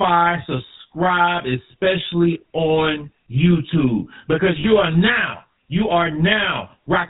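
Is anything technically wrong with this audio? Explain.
Yes. Three faults can be heard in this speech clip.

Throughout, there is channel delay (comb filtering). One channel lags the other by roughly 20 ms, and when the two are summed to mono, the shared content cancels at evenly spaced frequencies. With a lag that long, the notches start down around 20 Hz and repeat roughly every 50 Hz. This dense row of fixed dips gives the voice a rough, slightly doubled sound that stays constant from start to finish.

Also throughout, the speech carries plainly audible GSM full-rate codec damage, which fits the 13 kbps full-rate scheme. That codec models the vocal tract with a filter and excites it with a sparse, regularly spaced pulse train, discarding most of the excitation detail. Nothing survives above 4 kHz, so the voice is band-limited and muffled, and it has the characteristic buzzy, gravelly roughness.

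From 4.60 to 4.65 s, just before "are now you are", there are lost GSM frames. The gap is 40 ms, which points to two consecutive bad frames. The decoder filled it by reusing the parameters of the last good frame, so the missing stretch is heard as a brief rough, metallic ringing. The gap is too short to fade fully to silence before normal decoding resumes.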